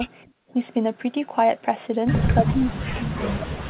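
At 0.26 s the room background is gated by the echo canceller. The loudspeaker is playing, and the canceller pulls the microphone down hard to keep echo out. The background falls by about 18 dB. The room goes suddenly dead for roughly a third of a second, then comes back at 0.53 s when the canceller releases.

From 2.39 s to the end of the clip, the talker's speech is suppressed in double talk. Both sides seem to be talking at once. The speech dips sharply, by around 35 dB at its deepest. The likely cause is the echo canceller failing to separate the near talker from the loudspeaker echo, so it attenuates both. Throughout, the telephone-band call path leaves nothing above 4 kHz, which fits G.711 coding.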